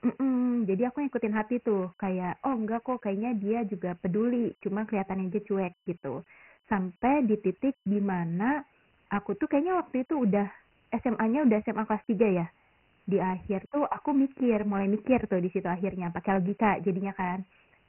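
Throughout, heavy Dialogic VOX ADPCM coding cuts everything above 3 kHz and leaves gritty hiss trailing the speech, fitting a 6,000-sample, 4-bit stream; spectrograms show a hard ceiling.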